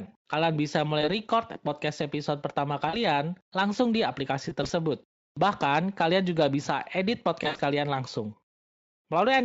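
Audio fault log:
1.01–1.09 s, 2.89–2.98 s, 4.49–4.71 s, 7.43–7.61 s: VoIP packet loss concealed by the speech codec. Speech drops out for about 20 ms, 40 ms (just before "langsung di"), 60 ms in brief gaps over 200 ms (after "langsung di"), and 120 ms over 160 ms with an 80 ms run (after "juga bisa edit"). The decoder extends the last pitch and spectral shape with falling gain, giving a buzzy or noisy, fading smear that lingers as each frame builds on the previous one. The Speex coding itself stays clean or nearly so.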